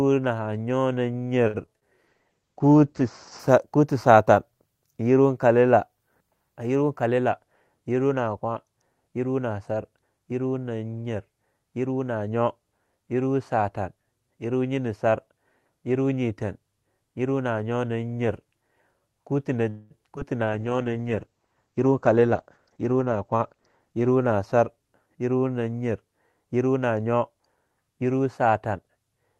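At 1.47 to 1.56 s a sound hangs on slightly too long, with a faint buzz or dip before the speech resumes exactly where it left off. That is a short stall from a late packet: the jitter buffer ran dry, and the receiver stretched the last sound for 66 ms until the packet turned up. Nothing was lost, but the playout delay grew by 66 ms.

Just after, at 1.66 to 1.69 s and again at 1.79 to 1.83 s, there are two tiny smears, each a brief wobble that can swallow a short consonant. These are short concealed packet losses. In each case 20 ms of audio never arrived in time, and the decoder filled the hole by extending the preceding sound before blending back into real audio.

From 2.09 to 3.45 s the speech turns rough and dull, then clears. This is a call bitrate drop. The bandwidth estimate fell, so the encoder went from 32 kbps to 11 kbps and held its lowest rate for about 1 s. The coded bandwidth also narrowed from 12 kHz to 8 kHz, which takes the top off the sound.

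At 6.82 to 7.47 s the speech sounds slightly hurried with no change in pitch. This is a jitter buffer speed-up to 108%. The buffer held more audio than its target, so the receiver snipped out short pitch-period pieces, roughly 50 ms in all, to cut the delay.

At 19.69 to 19.92 s the sound stops moving forward for about a fifth of a second, sustained as a fading buzz or hiss rather than silence, and then continues from the same point. This call audio freeze was likely caused by packets held up in transit that emptied the jitter buffer. 207 ms was filled in, and nothing was skipped.

At 20.16 to 20.19 s another short concealed packet loss leaves a brief smear. Here 20 ms went missing and only 5 ms was filled, which pulls the delay back by roughly 15 ms.

From 20.43 to 24.86 s a second call bitrate drop, again from 32 kbps to 11 kbps and from 12 kHz to 8 kHz, makes the speech muffled and watery for about 3.3 s at its lowest. 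Clarity returns by "yerwa nanyar yerwa". Inside this stretch, at 21.78 to 23.93 s, a second jitter buffer speed-up at 108% makes the speech rushed, removing about a fifth of a second of audio.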